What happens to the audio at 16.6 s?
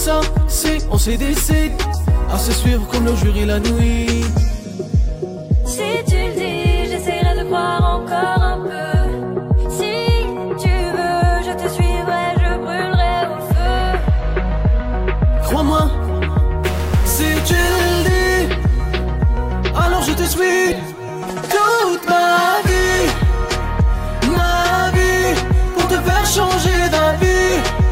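From 16.64 to 18.09 s the sound turns harsh and buzzy, likely a stuck bit: one data bit held fixed, knocking about half the samples off by a step around -25 dBFS. Unlike clipping, the distortion doesn't depend on loudness, and quiet moments fill with noise.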